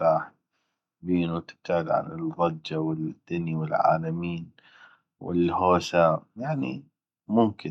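Nothing goes wrong anywhere in this bit of speech; there's no moment where the sound trips up, drops out or shifts in a way worth pointing to.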